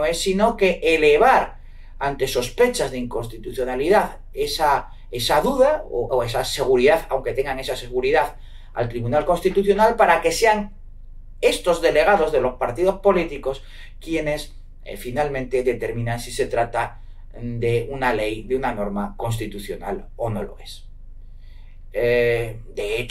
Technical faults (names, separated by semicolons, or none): none